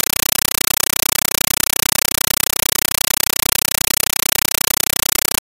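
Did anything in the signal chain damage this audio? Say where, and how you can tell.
Yes. From start to finish the speech is replaced by very loud, chattering static, a harsh buzz pulsing 31.25 times a second, each pulse a burst of noise about 8.0 ms long followed by silence. This is a compressed stream played as audio, and it happens at the playback or digital-link stage. An AC-3 (Dolby Digital) bitstream sent over S/PDIF or HDMI was treated as ordinary PCM samples instead of being decoded, so each coded frame comes out as noise padded with zeros.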